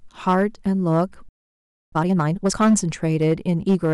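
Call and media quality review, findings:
Hard clipping throughout the speech: gritty crackle on louder syllables, driven about 5 dB past full scale with peaks squared off, a few percent of samples flattened. Gain staging before the converter or a fixed-point stage, so worth checking the input level.

Playback stall from 1.29 to 1.93 s: speech cuts dead for roughly 0.63 s, then resumes. Player's buffer probably ran dry or its thread got blocked, likely on the receive or decode side. Output just sits silent meanwhile.

Time-compressed catch-up from 1.93 to 2.55 s: speech runs at twice normal speed, pitch unchanged. Jitter buffer draining its backlog by dropping short slices and cross-fading the joins. Follows directly from the stall, so fixing that should clear this.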